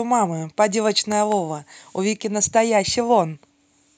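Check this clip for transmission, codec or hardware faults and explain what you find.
One hardware fault is present. A loud pop between 1.12 and 1.34 s is heard as two sharp pops in quick succession, peaking about 5 dB above the speech, which continues underneath. Its likely cause is a sudden voltage pulse from a plug, switch, static discharge or driver glitch entering the signal chain.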